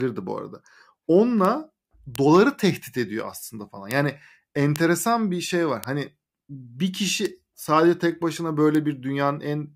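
At 1.45, 2.16, 3.91, 4.76, 5.84 (right after "bir şey var"), 7.25 (just before "sadece tek başına") and 8.75 s (after "sadece tek başına") the speech picks up sharp, isolated ticks. These are bit error spikes, where a flipped bit throws a sample or two off by a power of two before snapping back. They peak at about -9 dBFS at 1.45, 7.25 and 8.75 s, and about -3 dBFS elsewhere. Each is broadband and unrelated to the speech.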